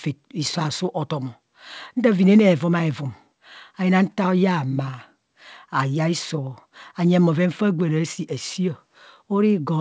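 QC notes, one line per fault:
No faults are present; the speech has come through a call path whose coding leaves nothing above 8 kHz, which fits the G.722 wideband codec at 64 kbps.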